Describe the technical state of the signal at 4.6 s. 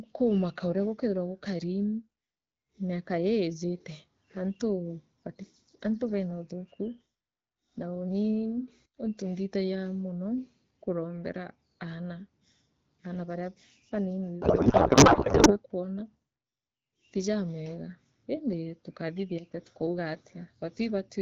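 At 4.6 s the speech comes through intact, carried by the AMR wideband (HD Voice) codec at 12.65 kbit/s with no fault at that moment.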